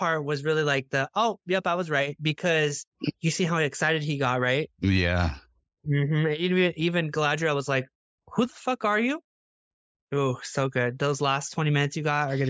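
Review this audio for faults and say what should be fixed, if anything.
Nothing here needs fixing; no faults turned up in this speech recording.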